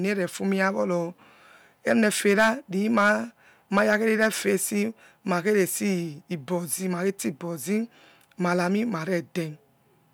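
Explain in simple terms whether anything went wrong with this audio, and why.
Hard clipping hits the loudest moments of the speech from 1.89 to 2.50 s, 2.97 to 3.12 s and 3.77 to 4.48 s. The peaks were too big for the recording to hold, so their tops were sliced flat, adding a harsh crackle that comes and goes with loudness rather than a steady hiss.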